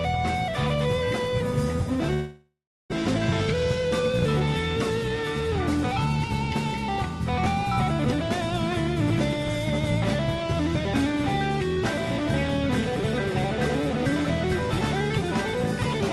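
From 2.13 to 2.94 s, a long network dropout likely halted packets. About 600 ms vanishes, masked by a fading buzz and then 380 ms of silence.

From 3.51 to 4.48 s, a jitter buffer speed-up trims about 100 ms in pitch-period slices, so the sound runs 9% faster, hurried but at unchanged pitch.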